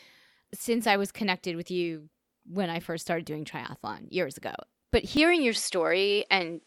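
Speech, with the input likely switched to a poorer device at 5.17 s: from there the sound turns duller, losing everything above 11.4 kHz, and picks up a faint new noise floor, with no gap or level jump.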